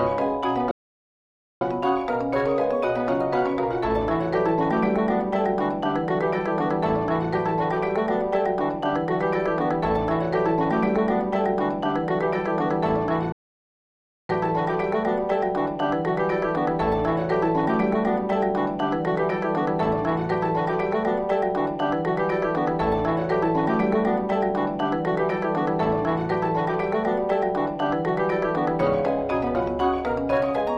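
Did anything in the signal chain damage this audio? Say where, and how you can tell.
Yes, two playback stalls: the sound halts at 0.71–1.61 s and 13.32–14.29 s, each nearly a second, likely the player starving or blocking, far longer than brief dropouts.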